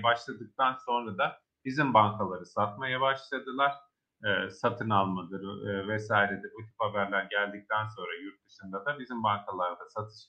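No technical faults are audible.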